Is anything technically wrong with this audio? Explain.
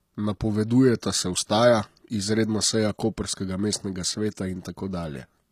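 Yes. Throughout the speech, the treble sounds synthetic: sibilants come out gritty and metallic, with a lispy edge, and the damage is plainly audible. This is likely HE-AAC compression at a low bitrate, consistent with about 24 kbps. The codec keeps only the lower spectrum and fakes the highs by copying lower bands upward under a coarse envelope, so upper harmonics don't line up with the real ones. A spectrogram would show a flat ceiling at 14.9 kHz and blocky, repeated-looking texture in the treble.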